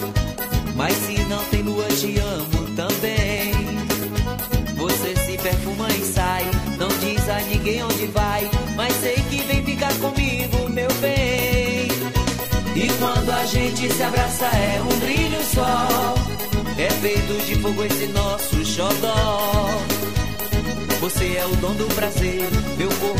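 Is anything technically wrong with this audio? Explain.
Yes. A DC step occurs at 12.47 s: the waveform's zero line suddenly shifts and stays offset for the rest of the clip. The jump is about -32 dBFS, the kind of shift a converter recalibrating or an offset input being switched in would cause. The sudden change in baseline is heard as a single low thump or click at that moment, while the sound itself carries on unchanged above the displaced zero line.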